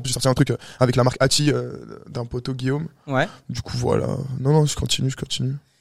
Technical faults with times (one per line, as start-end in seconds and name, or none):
0.00-1.72 time-stretched section